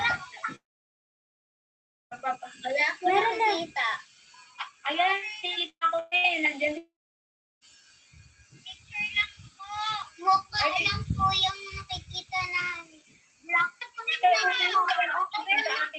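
From 0.55 to 2.14 s the sound drags into a fading buzz or hiss, then holds about 1.5 s of silence. This is likely a long network dropout, with 1.56 s of audio never delivered before playback resumes further on.

At 5.70 to 5.84 s, 5.99 to 6.14 s and 6.17 to 6.27 s, bursts of packet loss remove 60 to 120 ms each. The receiver stretches and fades the last sound, and the first gap sinks briefly into silence.

From 6.78 to 7.64 s the sound again fades into about 0.7 s of silence, likely another long network dropout, skipping 0.84 s of audio.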